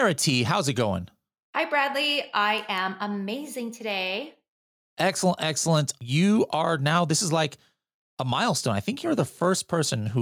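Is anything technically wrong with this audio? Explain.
No, nothing is technically wrong with this audio.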